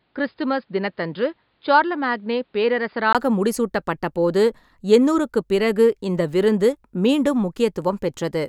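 Speech. From 0 to 3.15 s it sounds dull and boxy, with nothing above 5 kHz, about 5 dB quieter, and with its own faint noise floor. A brief gap at 3.15 s precedes fuller sound. This is likely an input switched to a poorer device.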